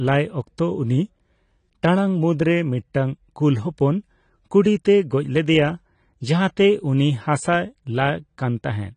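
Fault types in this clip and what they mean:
AAC compression: the speech is dull and smeared, with nothing above 10 kHz and a plainly audible warbling, fizzy texture on sustained sounds and sibilants, likely from AAC-LC coding at a low rate such as 32 kbps, where quantisation starves high bands and leaves spectral holes.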